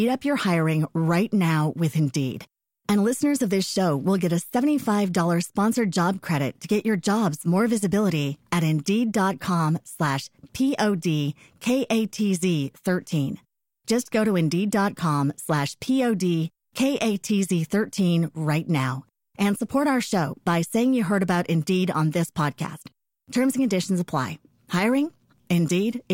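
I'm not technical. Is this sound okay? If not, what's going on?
Yes, nothing wrong can be heard anywhere in this recording.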